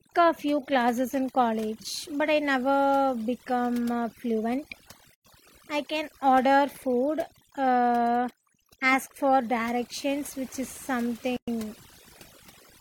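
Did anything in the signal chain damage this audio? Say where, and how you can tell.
Yes. Overdone noise removal runs through the whole clip, at the processing stage. The background drops and breaks up between phrases, with twinkling specks where isolated bands flicker on and off. That points to a suppressor set far too aggressively. It pushes any frequency band close to its noise estimate down hard or mutes it outright, so the quieter components of the voice are stripped away with the noise.

A gap at a join of encoded pieces appears twice, from 5.14 to 5.25 s (about 106 ms) and from 11.37 to 11.48 s (about 111 ms). This damage happened at the codec stage. Continuous speech drops into silence with smeared edges, then resumes exactly where it stopped, with nothing lost. That is what happens when separately encoded segments are concatenated untrimmed: each segment's encoder start-up delay and final-frame padding remain as dead air at the seam.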